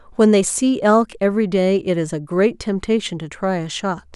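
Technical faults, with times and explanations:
The speech recording has no technical faults to report. There is nothing in it to time or explain.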